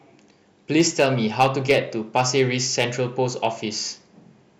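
Hard clipping cuts the speech peaks flat at 0.76–1.78 s (about 6 dB over), 2.16–2.41 s (about 3 dB), 2.80–2.84 s (about 5 dB) and 3.45 s (about 1 dB). The result is harsh crackly fuzz from high harmonics, not the rounded warmth of soft saturation.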